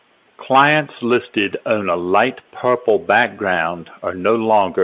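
No faults are audible anywhere in this speech.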